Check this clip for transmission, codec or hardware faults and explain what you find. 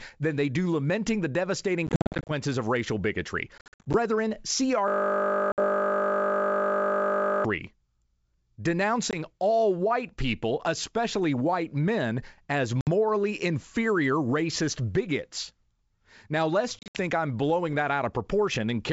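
Two kinds of fault are audible: repeated packet loss on an ADPCM call and one long system hang loop. The G.722 wideband coding underneath keeps the speech clear up to about 7 kHz with only faint upper-band hiss, which fits the full 64 kbit/s mode.

Packet loss on an ADPCM call appears at 1.87–2.33 s, 3.58–3.96 s, 5.52–5.60 s, 9.11–9.15 s, 12.81–12.88 s and 16.79–16.98 s. The speech breaks into hard-edged silent holes, and each hole is followed by a slightly distorted return, at times with a click or at the wrong level. The first event falls between "do lamenting the devastating" and "of racial bigotry". It loses about 270 ms of audio in short runs of up to 50 ms spread over 420 ms, which points to a few dozen lost packets. The 3.58 s burst loses about 220 ms over 360 ms. The 20 ms hole at 9.11 s comes just before "all white people especially", and the 130 ms loss at 16.79 s comes just before "I'm blowing that". 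The cause is missing packets filled with silence. ADPCM sends only differences from a running prediction, so when the decoder misses packets its predictor and step size drift away from the sender's. It then takes some tens of milliseconds to lock back on.

The system hang loop runs from 4.88 to 7.45 s, and the speech gives way to a steady buzz at 50 Hz. A single 20 ms slice of audio repeats exactly, 128 times. The machine or driver stalled while the sound hardware kept replaying the same short ring buffer. The length of that buffer sets the pitch of the buzz.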